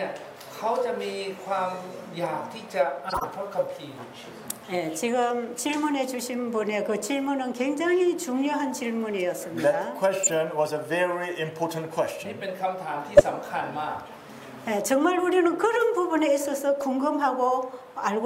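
Corrupt frame decoded at 3.09–3.26 s, 10.23–10.29 s, 13.15–13.21 s and 16.81 s. Compressed frames with flipped bits were played instead of concealed, so wrongly read gains and codes put energy at the wrong frequencies for the length of each damaged stretch. Each is heard as a short squeaky blip or burst of noise. The loudest is at 13.15 s, peaking at about −5 dBFS, and the faintest at 16.81 s, about −20 dBFS. The first burst runs longest.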